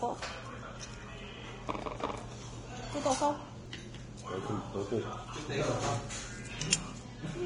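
Vorbis compression runs throughout. Nothing is present above 10.6 kHz, and the treble is coarsely quantised into grainy hiss with blurred attacks, most likely from heavy low-bitrate Vorbis encoding. A repeated buffer at 3.66 s replays a 1.45 ms slice four extra times, consistent with a 64-sample buffer arriving late, and is heard as a brief buzz. Another repeated buffer at 6.18 s plays one extra time and is heard as a single click.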